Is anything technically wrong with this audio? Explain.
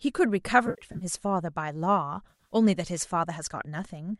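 Yes. AAC frame loss with concealment occurs twice in this speech, from 0.67 to 1.05 s and from 2.29 to 2.55 s. Missing frames, about 210 ms and then 160 ms, scattered through each span in runs of up to roughly 70 ms, were patched from the last good spectrum, so each patch sounds smeared and noisy. A spectrogram would show blurred blocks, and the waveform would show flattened, noise-like segments. The slight graininess heard elsewhere is likely the low-delay AAC compression.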